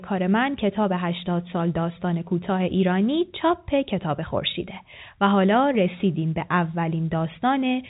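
No technical faults can be heard anywhere in this speech. It carries the narrow band of G.711 telephone coding, with nothing above about 3.8 kHz and only a faint noise floor riding under the voice.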